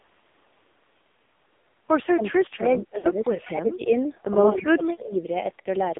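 Throughout, the speech carries the AMR narrowband mobile codec: the band is confined to roughly 250 Hz to 3.6 kHz, and the heavy buzzy, synthetic texture points to a low mode around 5.9 kbps. Unlike plain band-limiting, the voice itself sounds rebuilt from pitch pulses rather than merely muffled.

From 2.08 to 3.9 s the speech is suppressed in double talk, most likely an echo canceller clamping down while the far side talked. The voice dips in pieces, by about 30 dB at its deepest. The gating follows the other talker, not the radio link.

Inside that stretch, from 2.98 to 3.07 s, lost AMR speech frames leave about 60 ms of smeared, drawn-out sound that fades, which fits three lost 20 ms frames. A decaying stretched tail marks concealment, where suppression gives a clean level drop.

From 4.5 to 5.15 s a second, shallower double-talk suppression pulls the voice down by about 20 dB.

From 5.60 to 5.68 s another 60 ms frame loss brings the same stretched fade, and the voice returns rough.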